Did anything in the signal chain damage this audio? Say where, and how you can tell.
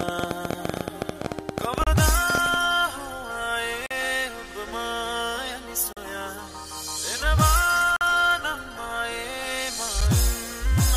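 Yes, two problems. From 0.01 to 2.55 s there's a train of clicks, about 14 a second at an uneven pace, roughly 40 in all, peaking around 15 dB over the sound. That's likely interference pickup in the analogue wiring or a faulty connection or power supply.

Then there's a gap between stream segments roughly every 2 s: 1.84 s (30 ms), 3.86 s (43 ms), 5.93 s (40 ms), 7.96 s (46 ms) and 10.01 s (7.5 ms). They're hard-edged silent holes at the segment boundaries, where the time stamps don't quite meet and playback pads with silence. Nothing's actually lost.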